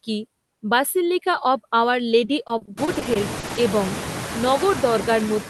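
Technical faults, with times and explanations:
Throughout, noise suppressor artifacts: the suppressor estimates the steady background in each frequency band and pulls it down frame by frame, by about 7 dB here. The floor dips between phrases and comes back up under the speech. Once the room noise rises sharply around 3 s, it sits only about 12 dB below the speech. On a spectrogram the noise floor shows as patchy, flickering speckles rather than an even haze.
2.25–3.59 s, repeated packet loss (robotic sound): audio keeps dropping out over this stretch in short holes, the longest about 40 ms. About a quarter of the span is concealed by extending the last sound, which gives a choppy, robotic texture with fragments missing. On a spectrogram the concealed bits look like smeared, flattened harmonic bands repeating, broken by abrupt seams. The waveform shows stuttering, repeated-looking segments with sudden envelope jumps.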